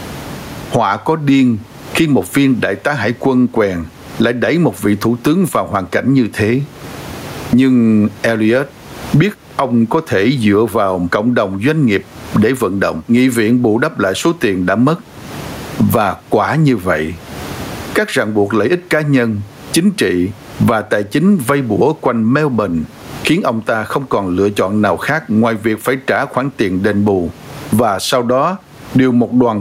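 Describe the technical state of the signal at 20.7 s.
At 20.7 s the speech shows gain pumping, present throughout: gain set far too high, likely held down by a fast limiter on each loud syllable, so the gain swings by around 25 dB. A noise gate would cut that background instead.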